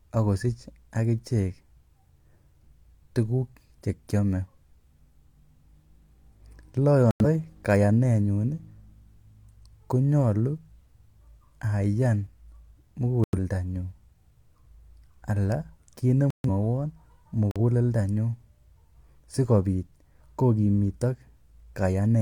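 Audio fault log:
7.11–7.25 s, 13.24–13.39 s, 16.30–16.49 s (just after "kiit ne"), 17.51–17.61 s: corrupt frame muted. The speech cuts abruptly to silence for 0.1 to 0.2 s. The decoder rejected damaged compressed frames and the player filled the gap with silence, keeping timing intact.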